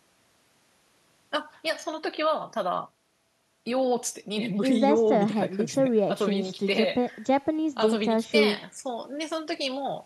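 No technical faults were found in this speech recording, so there is nothing to log.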